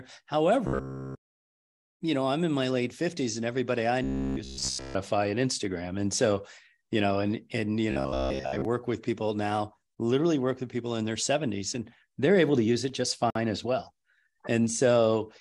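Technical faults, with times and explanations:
0.67–1.2 s, 4.04–4.95 s (after "and everybody I"), 7.91–8.65 s (between "know and and you" and "with people now literally"): robotic sound from repeated short buffers. A rigid buzz at 66.8 Hz, likely from a roughly 15 ms buffer looping, shows as evenly spaced vertical stripes, complete in the first two and mostly in the third.
13.30 s, between "to use it just" and "as well": gap at a join of encoded pieces. A 51 ms silence from leftover encoder delay and padding appears as a thin blank column with smeared edges.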